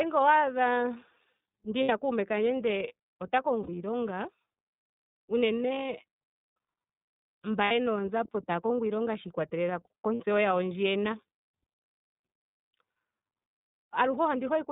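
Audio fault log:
throughout: iLBC codec. The speech is confined to a narrow telephone band of roughly 150 Hz to 3.7 kHz, with nothing reaching above it, and carries a plainly audible rough, slightly synthetic edge. Each 30 ms frame's excitation is coded on its own at about 13.33 kbps, which fits iLBC's 30 ms mode. That limited bit budget per frame is what gives the voice its coarse, synthetic texture.
1.83 to 1.90 s, 3.62 to 3.69 s, 7.65 to 7.71 s, 10.13 to 10.21 s: lost iLBC frames. Each gap lasts about 60 ms, which matches two missing 30 ms frames. During it the decoder fills in by repeating the last pitch cycle mixed with noise, so the dropout comes across as a brief held, buzzy vowel instead of silence. Because every iLBC frame decodes independently, the voice returns to normal almost at once after each gap.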